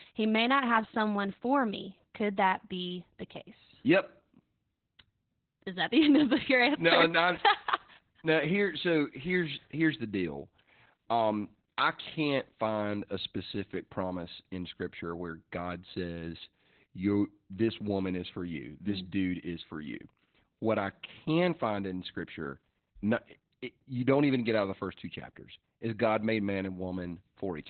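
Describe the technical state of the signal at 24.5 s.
At 24.5 s the speech carries Opus voice compression, which runs through the whole clip rather than only this moment. The band stops near 4.4 kHz, the narrowband limit the coder falls back to when bits are scarce, and the coarse linear-prediction excitation points to SILK at around 8 kbps. The damage is heavy: the voice sounds muffled, hoarse and faintly robotic, with sibilance and upper harmonics missing.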